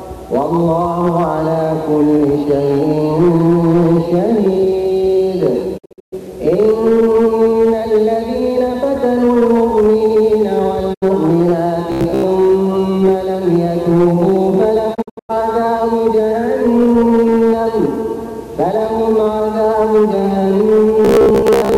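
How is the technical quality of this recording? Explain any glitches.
The recording has two kinds of glitches: three digital broadcast dropouts and two stretches of robotic sound.

The digital broadcast dropouts come at 5.77 to 6.14 s, 10.93 to 11.04 s and 14.93 to 15.31 s. The receiver lost valid frames and muted until good ones returned. Each gap fades out over about 20 ms. The first and third are broken into several short holes across about 336 ms. The first loses about 264 ms in total, and its longest hole is 120 ms. The third loses about 240 ms, and its longest hole is 96 ms. The middle one is a single 72 ms hole. The audio sent during these holes is gone.

Robotic sound from repeated short buffers appears at 11.92 to 12.23 s and again from 21.05 s to the end. The likely cause is audio arriving too late, so the same tiny chunk is replayed to fill the gap. The repeats impose a rigid 66.7 Hz buzz, which fits a buffer of about 15 ms. 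Most of the first stretch is repeated material, and about half of the final one is. The sound turns metallic and droning.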